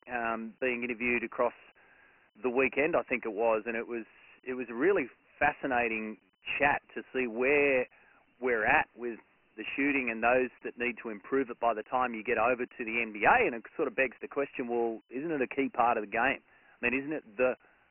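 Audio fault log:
throughout Dialogic VOX ADPCM: Nothing is heard above 2.9 kHz, which fits 4-bit coding at 6,000 samples a second. Gritty hiss trails the speech, and the coarse coding damage is heavy.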